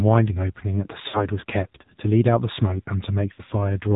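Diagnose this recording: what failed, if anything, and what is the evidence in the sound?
The codec stage failed here: the speech has passed through the AMR narrowband mobile codec, and the damage is plainly audible throughout. Nothing above 4 kHz survives, so a spectrogram shows a hard ceiling there with an empty band above it. The voice sounds buzzy and synthetic, which fits a low AMR mode around 7.4 kbps, where a few pulses per subframe must stand in for the real excitation of the vocal-tract model.

Lost AMR speech frames, a network-stage fault, appear at 1.08 to 1.28 s and again at 3.34 to 3.42 s. In each gap the decoder repeated its last good pitch and spectral settings at falling gain. The sound briefly smears into a drawn-out, warbly tone and fades, then returns weak or rough. The missing audio is about 60 ms in the first gap and 40 ms in the second, consistent with three and two 20 ms frames. 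On the waveform the envelope sags smoothly there, and the spectrogram shows frozen, blurred harmonics.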